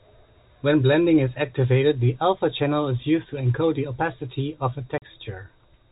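At 4.98 s the speech cuts to 40 ms of silence with hard edges: packet loss filled with silence, fitting two lost 20 ms packets.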